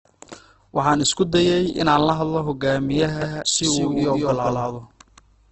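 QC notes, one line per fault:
throughout, Opus compression: The audio was likely squeezed through Opus in its music mode at a very low rate, which fits about 12 kbps. Everything above 8.2 kHz is gone, and band filling leaves the speech heavily grainy, rough and noisy rather than swirly.
3.22 s to end, doubled audio track: Just after "inaan la hadlo hogaamiyaha", a second copy of the speech is mixed in, likely from a slower capture path. It trails by about 150 ms at roughly equal level, with no room colour, and starts abruptly, giving a hard slap-back echo.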